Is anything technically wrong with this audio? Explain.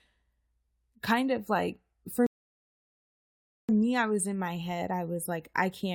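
Yes, there's a rebuffering stall from 2.26 to 3.69 s. Right after "kind of like for" the player runs dry and the speech drops to silence for about 1.4 s, then picks up cleanly at "me i was in". Nothing's skipped; it just stretches the clip.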